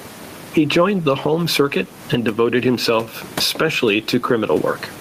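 Speech, and the whole thing pumps, swinging by something like 15 dB, so everything sounds squashed. That gain pumping is likely a mic gain set way too high with a fast limiter clamping down, with the room noise itself sitting about 30 dB under the talking.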